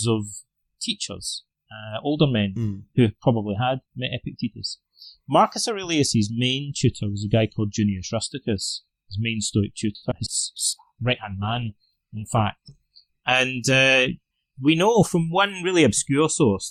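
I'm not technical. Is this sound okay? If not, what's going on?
No, there are several faults, all packed between about 10 and 15 seconds.

At 9.95 to 10.04 s, the sound freezes and drags on one spot for about 70 milliseconds, then carries on. This is a short stall from a late packet. A piece of the call arrived late, so the receiver stretched the last sound while waiting. Nothing was lost.

At 10.10 s and again at 10.25 s, there are brief smears or wobbles, each lasting a few hundredths of a second. These are short concealed packet losses. About 20 milliseconds of sound never arrived each time, and the receiver papered over the gap by continuing the previous sound.

From 10.58 to 14.53 s, the sound turns rough, watery or muffled. It is at its worst for about 1.6 seconds before clearing. This is a call bitrate drop. The connection weakened, so the sound was sent in much less detail.

From 10.85 to 11.30 s, the sound runs slightly slow, at about 94% speed, while keeping its normal pitch. 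It drags a little and may wobble. This is a jitter buffer slow-down. The receiver was low on stored sound, so it quietly repeated tiny slices, adding about 35 milliseconds to rebuild its reserve.

From 13.72 to 14.76 s, the sound runs slightly fast, at about 107% speed, and feels a bit hurried without any change in pitch. This is a jitter buffer speed-up. Too much sound had piled up waiting, so the receiver trimmed roughly 70 milliseconds of tiny slices to catch up.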